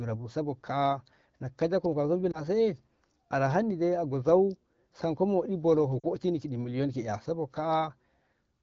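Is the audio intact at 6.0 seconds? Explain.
No. From 6.00 to 6.06 s the sound briefly fades to near silence, a short gap about 40 ms long that fits two consecutive 20 ms frames. Those are lost AMR speech frames: radio errors corrupted them, so the AMR-WB decoder filled the gap by reusing the last good pitch and vocal tract settings at falling gain. Because wideband concealment fades quickly, the audio thins rather than stretching out, then returns weak or rough for a moment.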